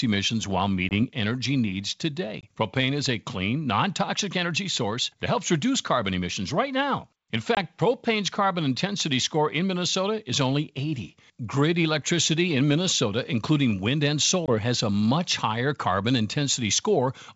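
Packet loss on an ADPCM call hits at 0.89, 2.41, 7.55 and 14.46 s: each time about 20 ms, likely a couple of packets, drops to hard-edged silence, then the decoder's predictor and step size have drifted from the sender's, so the speech comes back slightly distorted before settling, all over the G.722 wideband coding's faint upper-band hiss.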